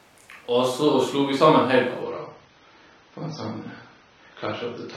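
At 2.02 s the adaptive stream switches to a lower bitrate and stays there to the end of the clip, most likely because the connection slowed and the player fetched a cheaper version of the stream. The speech loses everything above 6.3 kHz at once, with no gap, and codec artefacts thicken. The sudden dulling fits a step down from roughly 96 kbit/s AAC to about 24 kbit/s.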